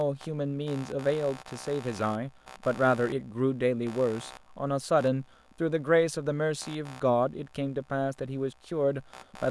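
Computer activity noise runs through the whole clip, from start to finish. Shifting processor, graphics or mouse load is disturbing the ground shared by the audio circuit, so a buzzy, chirping texture pulsing at roughly 70 times per second sits beneath the speech, some 20 dB down. It rises and falls with the machine's workload, not with the speech, which is why it persists through pauses and never follows the rhythm of the talking.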